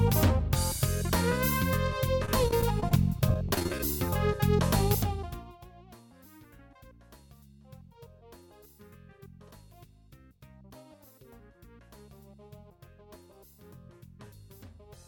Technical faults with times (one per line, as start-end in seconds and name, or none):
2.25-2.92 repeated packet loss (robotic sound)
3.29-3.80 repeated packet loss (robotic sound)